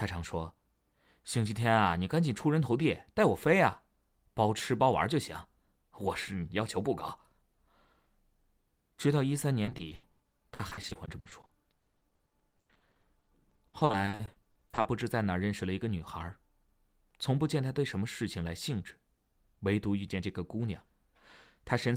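Speech, and from about 9.65 s to 14.87 s it breaks up with repeated packet loss, giving that robotic sound. Dozens of short dropouts land one after another, none longer than about 80 ms, and each is papered over by stretching the last bit of sound. Roughly a third of that stretch ends up as filler rather than real audio, so it comes across choppy, with pieces of the speech simply gone.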